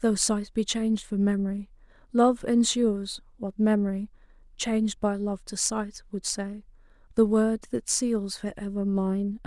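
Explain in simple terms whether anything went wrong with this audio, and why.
Nothing went wrong; this speech recording sounds as intended.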